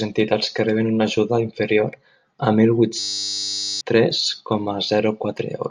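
Speech clip with a system hang loop from 2.99 to 3.81 s. The speech gives way to a steady 100 Hz buzz, which is one 10 ms slice of audio repeating about 82 times. That pattern means the system or audio driver stalled while the hardware kept replaying the same small ring buffer. The repeats cover up roughly 0.7 s of the speech that should have been there, so the talker jumps ahead once playback resumes.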